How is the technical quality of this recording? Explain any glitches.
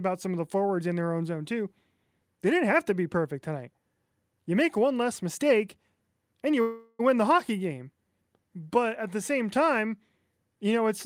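The recording has one glitch, a call audio freeze from 6.61 to 7.01 s. The last sound is stretched into a fading buzz for about 0.38 s, likely because packets stalled and the jitter buffer ran dry. The speech then resumes where it stopped, with nothing lost but running about 0.38 s later.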